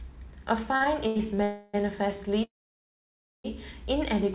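Between 0.76 and 1.21 s, packets kept arriving late, so the jitter buffer ran dry four times. The receiver bridged each gap by extending the last sound, which adds about 153 ms of filler in all, the longest single gap 82 ms. Nothing is lost, but about a third of that stretch is concealment, so the speech drags and jerks forward in a repeated stall, a stutter.

Two call audio freezes follow, likely caused by packets held up in transit until the buffer emptied. From 1.43 to 1.76 s the last sound is stretched into a fading buzz for about 302 ms, with no true silence, before the speech resumes where it stopped. From 2.44 to 3.46 s the wait is longer, about 1 s: the held sound fades out and roughly 940 ms of it is silence before the speech picks up again, now running that much later. Throughout, the sound has nothing above 4 kHz, which points to a G.711 mu-law call path.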